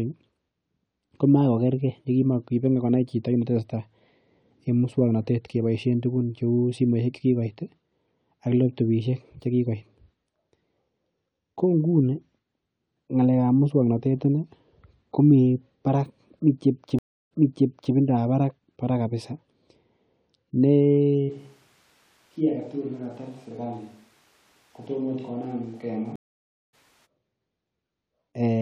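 At 16.99 s a stream reconnect cuts in. The audio drops out for 0.32 s, then a fresh decoder resumes 0.63 s earlier, repeating a stretch. From 21.31 to 27.05 s the speech turns roomy, hollow and thin, roughly 10 dB quieter, with more background noise. This is likely a switch to a distant microphone. At 26.16 s a second reconnect gives 0.57 s of silence, then resumes roughly 0.4 s later, skipping ahead.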